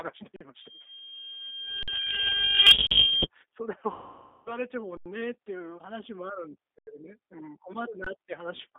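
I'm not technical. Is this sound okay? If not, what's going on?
No. Three separate problems can be heard in this speech recording.

The whole clip has passed through the G.729 codec, a compression method used for internet phone calls. It keeps only the core of the voice, roughly between 300 Hz and 3.7 kHz, and rebuilds it from a simplified model. As a result the speech sounds thin, rough and slightly robotic.

An underrun with held sample happens six times: at 0.36 to 0.41 s, 1.83 to 1.88 s, 2.87 to 2.91 s, 4.97 to 5.06 s, 6.79 to 6.87 s and 8.04 to 8.07 s. Each time the playback system ran out of audio for 20 to 85 milliseconds and froze on its last value, so the sound briefly stops. When the audio returns it carries on from where it stopped, so there is little or no click.

A loudspeaker feedback squeal runs from 0.60 to 3.27 s. A microphone picked up its own loudspeaker, and one pitch, around 3.2 kHz, kept feeding back on itself. 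It swells over about two seconds into a steady whistle that ends up somewhat louder than the speech.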